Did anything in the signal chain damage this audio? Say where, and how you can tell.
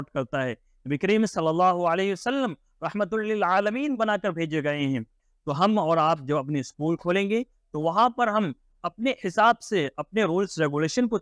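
No, no chain damage heard.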